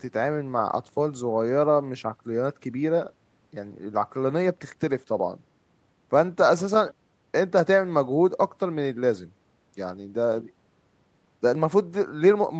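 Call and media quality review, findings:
Nothing to flag on this speech clip; it sounds like an ordinary call path with the mic's usual low-cut and the codec's top end stopping around 8 kHz, both expected.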